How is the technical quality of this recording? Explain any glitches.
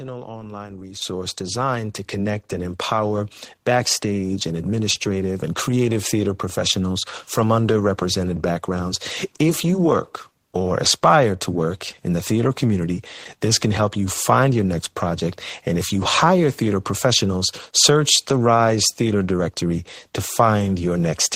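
The recording has two sudden level steps early on, both from the microphone volume being stepped up. At 1.02 s the whole signal jumps by about 9 dB, and at 2.04 s it rises again by about 2 dB. Each time, the input gain on the microphone was raised in a single step, so the speech and the background noise get louder together, instantly and without a fade.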